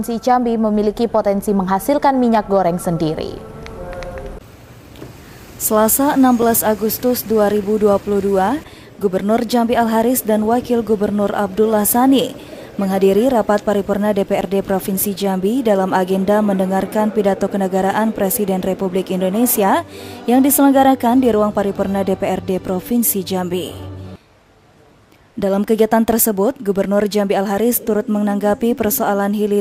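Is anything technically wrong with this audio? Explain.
Yes: three blocks of digital silence, at 6.42 s, 14.41 s and 26.13 s. Each time, the program likely failed to fill its output buffer in time, so a run of samples went out as zeros. The dropouts at 6.42 s and 26.13 s last about 2.7 ms, which fits a 128-sample buffer, and they come across as a tick or dip. The one at 14.41 s lasts about 10.7 ms, which fits a 512-sample buffer, and it comes across as a tick or dip. The sound cuts off and back with no fade.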